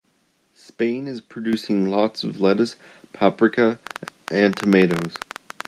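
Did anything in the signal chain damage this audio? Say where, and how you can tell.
Yes, two things. At 1.53 s there's a microphone volume stepped up event, and it sits in the call processing stage. The speech and the room noise behind it jump together by about 7 dB in a single step. That's the signature of the call software deciding the mic was too quiet and bumping the device input gain at once, rather than riding it smoothly.

From 3.87 s through to the end of the clip at 5.68 s there's a train of clicks, about 12.5 per second at an uneven pace. Each click has much the same shape, they tick over the speech and the gaps alike, and they peak around ten decibels above the speech itself. Because it's a pulse stream independent of the speech, the likely source is electrical interference getting into the analogue wiring from nearby equipment.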